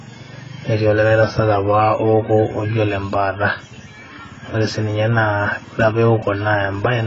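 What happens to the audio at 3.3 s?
AAC compression runs throughout, including 3.3 s: the speech stops at 7.7 kHz and sounds dull and warbly, likely from coarse AAC-LC quantisation near 16 kbps.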